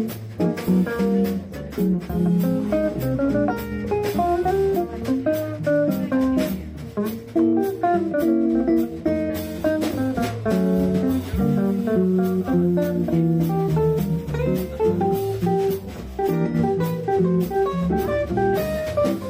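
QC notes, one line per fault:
No faults found on this pass. Nothing here needs flagging.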